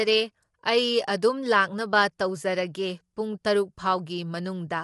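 From start to finish, the speech has a rough, grainy texture. Noise fills the gaps between the harmonics of the voice, so it never sounds clean. Nothing is present above 11.6 kHz, which leaves the top end dull and cut off. The likely cause is low-delay AAC compression, such as AAC-ELD. The damage is plainly audible. It fits a bitrate of around 32 kbps.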